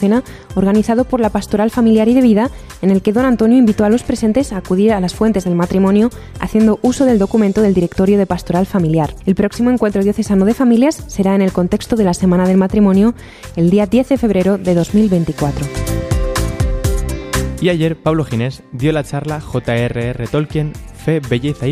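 Nothing goes wrong anywhere in this recording, so there's nothing here to flag or explain.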